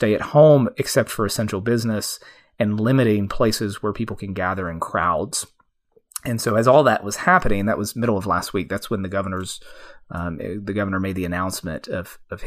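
At 0.54 s, just before "except for essential business", there is a single sharp click. At 3.25 s, between "for essential business and" and "places where people can", a second click follows. Both are likely dropped samples: a couple of samples went missing, a tiny fraction of a millisecond. The waveform jumps straight to a later value. Nothing audible is lost. The jump itself makes the click, a thin vertical line across the spectrum.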